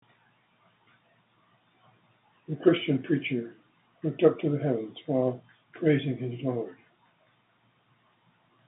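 No technical faults can be heard in the speech, which comes over ordinary G.711 mu-law telephone coding at 64 kbps with the usual phone-line band of about 150 Hz to 3.7 kHz.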